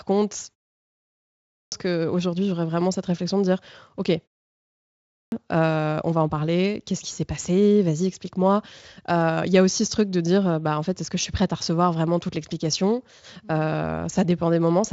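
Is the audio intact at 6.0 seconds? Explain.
Yes, the audio is intact at 6.0 seconds, with no fault present at that moment.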